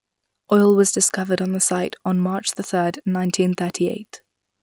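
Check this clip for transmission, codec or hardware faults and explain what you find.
One fault runs through the whole clip: the resampler restarted on every block. The speech was converted from 24 kHz to 48 kHz in 50 ms blocks. Each block was filtered alone, so its edges lacked real neighbouring samples. That leaves a small error at every boundary. You hear it as a ticking at 20 Hz, almost a low buzz. It rides on the speech and vanishes in silence.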